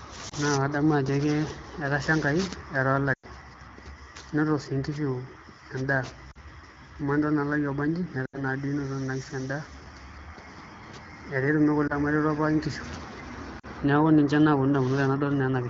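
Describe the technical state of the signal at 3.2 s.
At 3.2 s the signal is inside a run of lost AMR speech frames, lasting from 3.13 to 3.27 s. About 100 ms of coded speech never arrived intact, which fits five consecutive 20 ms frames. The wideband decoder fills the gap by repeating the last good pitch and vocal tract settings at steadily falling gain. The result is a brief smeared tone that drops to near silence within two frames, then a weak, rough re-entry. On a waveform the envelope decays within the span. On a spectrogram the harmonics freeze flat and then dim.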